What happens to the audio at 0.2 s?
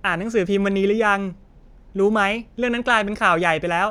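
Nothing goes wrong at 0.2 s; the speech there is intact, with no dropout, click or distortion.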